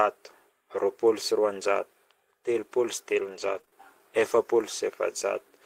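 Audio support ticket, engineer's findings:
Repeated packet loss (robotic sound), 3.09–3.74 s: three short gaps, longest 29 ms, patched by stretching prior audio. Network jitter buffer concealment, gives that choppy speech.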